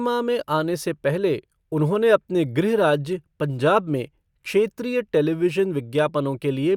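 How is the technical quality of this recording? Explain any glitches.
No glitches turn up anywhere in this speech recording. Nothing breaks into the audio at any point, so there is nothing to explain.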